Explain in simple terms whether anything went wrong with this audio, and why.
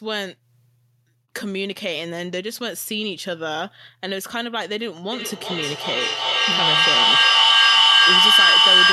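Something did go wrong: there's a feedback howl starting at 5.12 s and running right to the end of the clip. It sounds like two devices in the same room were on the call, so the speaker's sound kept getting picked up by the microphone and played back a bit louder each time. It narrows into a high whistle around 3 kHz that pulses roughly every 0.4 s and ends up much louder than the speech.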